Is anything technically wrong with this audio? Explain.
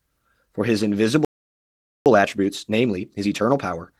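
Yes. There are two related faults.

At 1.25 s the speech cuts out to silence for about 0.81 s, until 2.06 s. This is a playback stall. The player likely ran short of buffered data or was blocked, so output halted before resuming.

From 2.06 s to the end there is time-compressed catch-up. The player trims its backlog by removing tiny slices and cross-fading the joins. The speech runs about 1.25 times faster at unchanged pitch.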